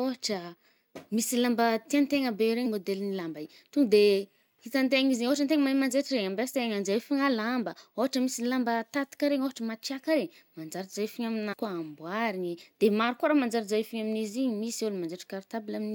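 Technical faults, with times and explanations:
2.65 s and 11.52–11.54 s, damaged data in a compressed stream: corrupted bytes make the decoder misread a frame, lose sync and hunt for the next header, leaving a brief glitch just before "môdel’ny lamba" and again later.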